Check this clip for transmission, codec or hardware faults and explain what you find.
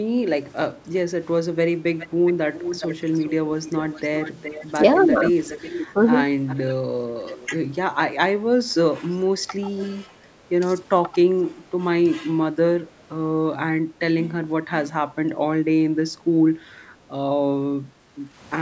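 Two kinds of fault are audible in this speech clip.

Echo leak at 1.98–3.29, 3.67–4.66, 5.37–5.85, 6.47–6.75 and 7.36–7.5 s: a far-end speakerphone's echo canceller likely let its loudspeaker pickup through. A discrete copy trails the voice by 415 ms, later 487 ms, about 15 dB down, fading to about 20 and 30 dB below. Reverberation would instead smear into a continuous tail.

Speech suppressed in double talk at 8.9–9.0 s: with both sides talking, the canceller likely turned this talker down along with the echo. The voice dips by about 25 dB for roughly 100 ms. A packet-loss dropout would leave a hard gap, not a level dip. The normal call high-pass and the 8 kHz bandwidth limit are not part of this fault.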